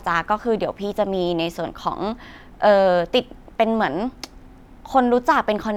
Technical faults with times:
none

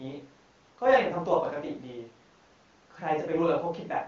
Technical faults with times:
none

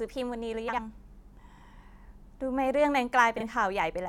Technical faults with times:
0.68-0.79 frames out of order
3.38-3.43 frames out of order

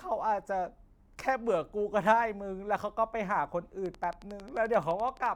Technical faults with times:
3.86-5.27 train of clicks

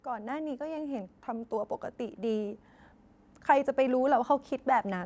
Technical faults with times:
0.05-2.63 automatic gain rising

